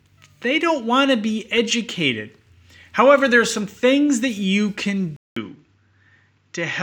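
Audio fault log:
5.16 to 6.82 s, input switched to a poorer device: after "things that you can", a 200 ms gap, then duller audio capped at 7.4 kHz and about 5 dB quieter, likely from a different mic.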